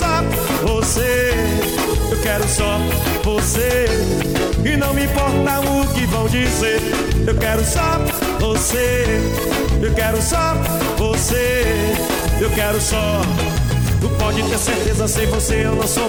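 No technical faults can be heard anywhere in this recording.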